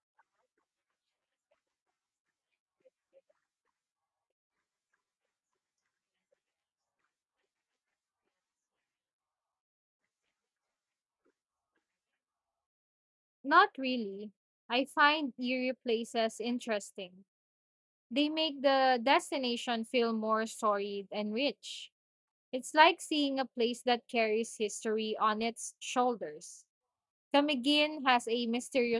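Nothing technically wrong turns up in this speech recording, so there are no problem spots, times or causes to point to.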